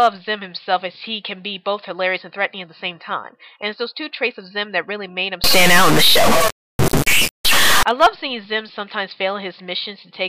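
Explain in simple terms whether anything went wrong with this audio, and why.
Between 5.44 and 7.83 seconds the sound turns harsh and buzzy, with a fairly strong gritty noise filling any quiet bits. That points to a stuck bit, likely a broken line or converter where one bit stays fixed, so about half the values come out wrong.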